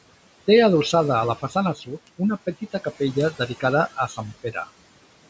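Noise suppressor artifacts run through the whole clip. The suppressor pulls the room noise down by about 18 dB frame by frame, so the background dips between phrases and swells back under the speech.

From 0.15 s right to 5.27 s there are word clock ticks, sharp little clicks of uneven strength arriving roughly every 70 ms, somewhere around seventy in all. The receiving end is free-running against the sender's clock, off by a few hundred parts per million, so each time the two clocks slip past each other a single sample is dropped or repeated and you hear a tick.

At 1.75 to 1.89 s there's speech cut by the noise suppressor. It mistook a soft stretch of the speech for background and pulled it down by up to about 10 dB along with the noise, so that bit sounds swallowed and faint.

It happens again between 4.08 and 4.68 s, this time in short patches, with the deepest drop around 12 dB. Soft sounds in there get ducked with the background and come out swallowed, as if half-spoken.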